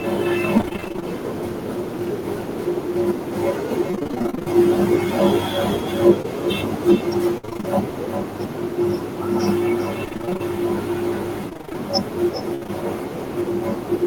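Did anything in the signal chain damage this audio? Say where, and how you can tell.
Yes. Call processing failed first. Speech is shadowed throughout by a thinner copy about 11 dB down and roughly 0.4 s late. That is echo with no canceller: the far loudspeaker leaks into the far microphone, and nothing removes it.

The network caused repeated packet loss, heard as robotic sound. It occurs at 0.57–1.04 s, 3.91–4.48 s, 7.38–7.65 s, 10.05–10.41 s and 11.49–12.70 s. The sound turns choppy and robotic while concealment patches hole after hole.

There is also one short concealed packet loss at 6.22–6.26 s. About 20 ms went missing. The receiver extended the previous sound to cover it, leaving a brief smear.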